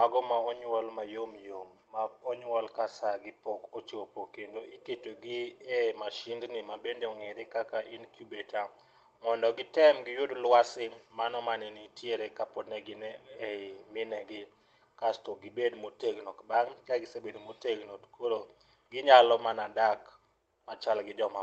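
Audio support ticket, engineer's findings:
Listened through the speech clip; nothing stood out, with the call path behaving as a normal Opus call at around 24 kbps would.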